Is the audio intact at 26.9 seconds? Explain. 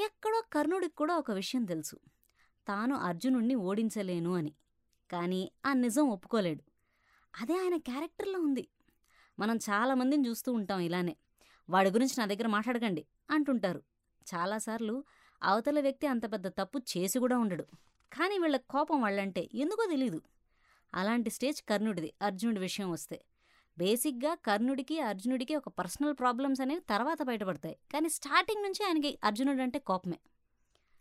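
Yes, the speech at 26.9 seconds plays through cleanly with no audible fault.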